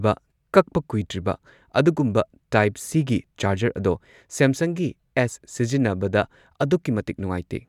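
Nothing goes wrong anywhere in this bit of speech; there's no technical fault to point to at any moment.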